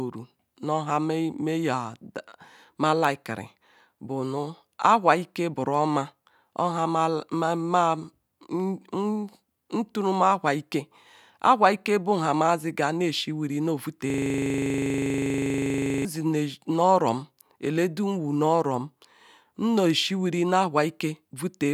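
A system hang loop runs from 14.10 to 16.05 s. The computer or its audio driver stopped supplying new data while the sound hardware kept replaying the same 40 ms stretch of its ring buffer, which points to a buffer of about that length. The speech gives way to one tiny fragment repeated roughly fifty times, producing a rigid, mechanical rattle-buzz at 25 Hz that ends abruptly when normal playback resumes.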